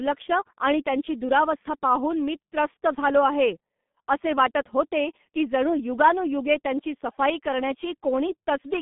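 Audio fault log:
Throughout: G.723.1 codec. The speech has been squeezed through a very low-rate internet-telephony coder, consistent with about 6.3 kbit/s, working in 30 ms frames and keeping only a telephone band of about 150 Hz to 3.5 kHz, with nothing above 3.8 kHz. With the top end gone and the vocal model refreshed only once per frame, the heavy coding damage makes the voice sound muffled and hoarse, and consonants smear together.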